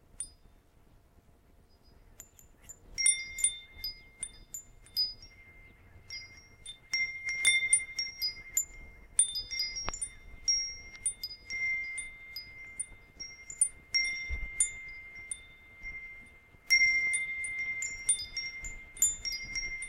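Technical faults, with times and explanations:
No technical fault can be heard in this recording of sounds. There is nothing here that calls for a time or an explanation.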